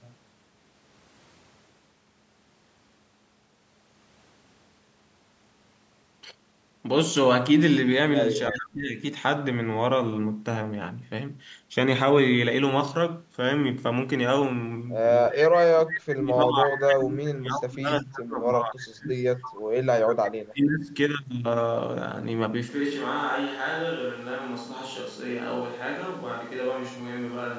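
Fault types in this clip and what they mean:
Speech suppressed in double talk: The echo canceller most likely could not tell this talker apart from loudspeaker echo while both sides spoke, so it turned everything down. The speech dips sharply at 8.5 to 9.0 s by about 20 dB, briefly at 15.29 to 15.4 s by about 15 dB, and then dips over a long stretch from 15.6 to 19.15 s and again at 20.22 to 20.95 s, falling by as much as about 30 dB.
Echo leak: The far end's echo canceller likely failed to remove everything its microphone picked up from its loudspeaker, so part of the voice was sent back. Short scraps of a delayed copy arrive 332 ms behind the original, at 19.18 to 19.24 s very faintly, about 35 dB down, and at 19.42 to 19.57 s and 20.09 to 20.16 s much more clearly, only about 15 dB below the speech.
Switch to a distant microphone: The close microphone's signal likely dropped out at 22.70 s, and a microphone further from the talker carries the audio to the end. 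The voice suddenly turns roomy and hollow, loses body in the bass and falls about 5 dB in level. Room noise rises to about 25 dB below the speech, which is more audible than before the change.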